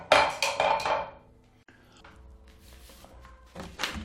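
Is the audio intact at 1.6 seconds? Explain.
No. A gap at a join of encoded pieces opens from 1.63 to 1.68 s: about 54 ms of silence with smeared edges. Separately encoded segments were butted together untrimmed, leaving encoder delay and final-frame padding in place before the sound resumes where it stopped.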